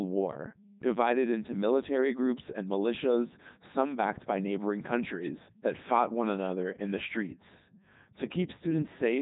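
A steady mains hum runs from start to finish: a low, constant tone at 50 Hz, sitting roughly 35 dB below the speech. It comes from power-line current leaking into the signal path, most plausibly through a ground loop or a transformer close to the cabling. Unlike rumble or wind, it keeps a fixed pitch and level whether or not anyone is talking.

Throughout the clip the speech has also passed through the Codec 2 vocoder, and the damage is heavy. Codec 2 discards the waveform and sends only pitch, voicing, loudness and a rough spectral outline, and the decoder rebuilds the voice from sine waves. The result is robotic and buzzy, with nothing above about 3.8 kHz. The quality fits the codec's top 3.2 kbit/s mode. What sets it apart from an ordinary low-bitrate codec is that there is no warbling or smearing of a real waveform. The voice sounds wholly synthetic.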